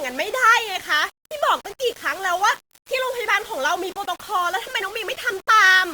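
Throughout the speech there is grainy, signal-following distortion sitting roughly 20 dB below the voice, with quiet passages turning gritty. The likely cause is low bit depth without dither, consistent with rounding to about 6 bits.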